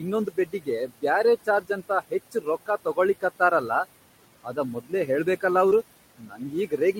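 It's a speech clip with room noise sitting about 18 dB under the voice, and a noise suppressor working hard on it throughout, pulling the background down by about 17 dB. You can hear the noise sink in the gaps and creep back under the voice. There's also speech cut by the noise suppressor, where it mistakes parts of the voice for noise and ducks them by about 11 to 16 dB. That happens at 0.26 to 0.68 s (about a couple of tenths of a second affected in all), at 1.45 to 1.7 s just before "ಅಂತ ಹೆಚ್ ರೊಕ್ಕಾ ತೊಗೊಳಿಕತ್ತಾರ", at 2.32 to 2.47 s between "ಅಂತ ಹೆಚ್" and "ರೊಕ್ಕಾ ತೊಗೊಳಿಕತ್ತಾರ ಅಲ್ಲಾ", at 4.74 to 5.09 s, and from 6.18 s to the end, so those bits come out faint or swallowed. Around 5.69 to 5.73 s there's a short concealed packet loss, about 20 ms missing, with the decoder stretching the preceding sound to cover the hole, so it's a brief smear. Overlapping it, from 5.71 to 5.73 s, there's a lost packet rebuilt from error correction: a 20 ms stretch played from the low-bitrate backup copy, which fits a single lost packet and sounds a touch rougher and noisier.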